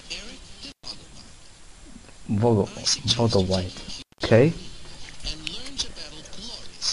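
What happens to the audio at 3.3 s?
Nothing goes wrong at 3.3 s; the audio carries on intact through that moment.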